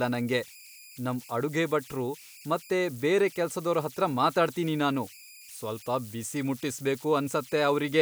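A speech recording with converter idle tones running through the whole thing. There's a whistle sitting around 2 kHz, plus a gritty texture, with the error at about 23 dB below the signal. That points to a delta-sigma converter with no dither: when its input gets small, it settles into repeating bit patterns, and those loops come out as a tone whose pitch is set by the input's DC offset.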